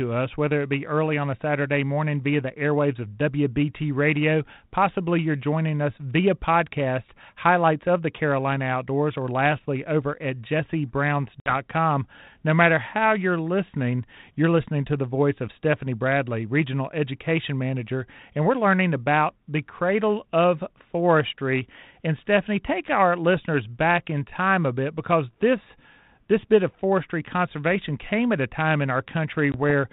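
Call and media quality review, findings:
Packet loss on an ADPCM call at 11.40–11.54 s (about 60 ms, roughly three packets) and 29.52–29.55 s (about 20 ms, one packet). Hard-edged silent gaps; decoder predictor and step size desynchronise, so speech resumes slightly distorted before resettling.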